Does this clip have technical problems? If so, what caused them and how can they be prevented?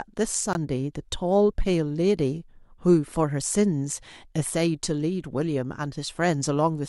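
Yes. At 0.53 to 0.57 s the speech drops to silence for 19 ms and then resumes, a Bluetooth stall. The likely cause is interference delaying packets until the headphones' buffer ran empty. Keeping the phone close and clear of 2.4 GHz congestion prevents it.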